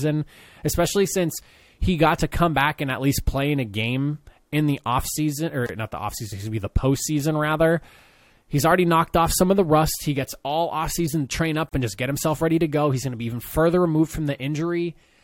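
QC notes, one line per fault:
5.66 s and 11.69 s, gap at a join of encoded pieces: silences of 28 ms after "game in the offseason" and 37 ms after "offseason to train up", 6.0 s apart. Separately encoded segments were joined with each one's leading encoder delay and final-frame padding left in, so continuous sound briefly drops out.
8.54–9.06 s, CD scratch ticks: four tiny ticks, the longest about 2 ms, spaced roughly six a second and ending just before "off some of the". A disc blemish destroys more data on each revolution than error correction can rebuild, so the player interpolates or mutes those samples.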